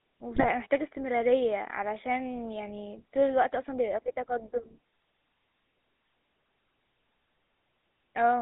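Speech with a buzzy, gravelly roughness throughout, confined to a narrow band from about 250 Hz to 3.7 kHz. That points to the GSM full-rate codec at 13 kbps, which rebuilds the voice from a vocal-tract model driven by sparse, regularly spaced pulses. Between 0.34 and 0.45 s the sound breaks into squawks and gargling pops. These are GSM bit errors: corrupted filter, pitch or gain values distort the spectrum and level frame by frame, which fits about five damaged frames at an error rate of roughly 3 percent.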